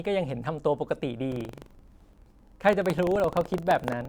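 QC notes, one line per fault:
1.28 s to 4.09 s, buffer tearing: a steady robotic rattle at about 23.4 Hz under the speech. Writer and reader have slipped on the ring buffer, so a small slice of each 2048-sample buffer replays audio from roughly 150 ms back.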